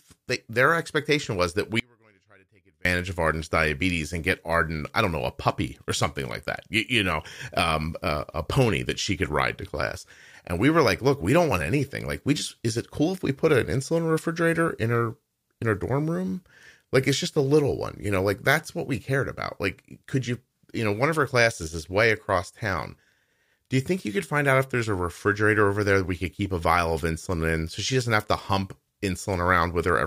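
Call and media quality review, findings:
Audio dropout to a faint residue, 1.80–2.85 s, after "their expectation was that": about 1.05 s lost, only faint leak roughly 35 dB down. Likely upstream signal loss, path still live.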